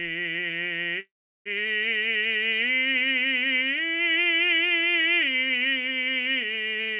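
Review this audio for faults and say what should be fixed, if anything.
From 1.00 to 1.48 s the music stops and a call audio freeze fills the gap. A brief buzzy continuation fades to about 360 ms of silence, then the music resumes exactly where it left off, so nothing is lost but everything after is about 455 ms late. The likely cause is delayed packets draining the jitter buffer. On a waveform this shows as a decaying stub and then a flat line. On a spectrogram, a smeared sliver fades into a blank column, all beneath the 4 kHz ceiling that fits a G.711 A-law call path. To prevent it, give the jitter buffer more headroom and reduce network jitter or congestion on the route.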